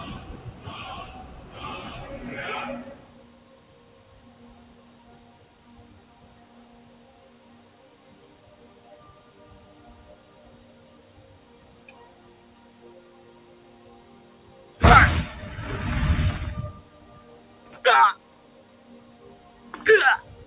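Noise suppressor applied to music or sounds, throughout the clip: a speech-tuned suppressor treats steady tones, ambience and decay as noise and pulls them down by around 10 dB while onsets pass, so sustained parts sink and pump. The band stops near 4 kHz, which fits a narrowband G.711 call codec.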